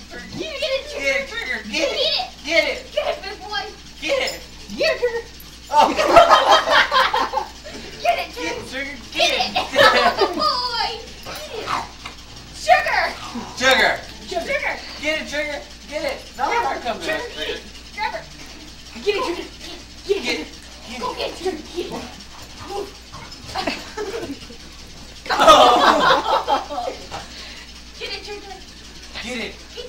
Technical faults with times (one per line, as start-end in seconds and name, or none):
24.10 damaged data in a compressed stream